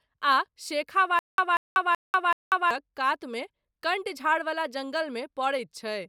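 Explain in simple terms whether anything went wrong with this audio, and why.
The playback most likely stalled between 1.19 and 2.71 seconds, causing a stutter with silent gaps. A scrap of speech about 190 ms long plays four times, each followed by about 190 ms of dead silence, and the speech meant for that stretch is lost.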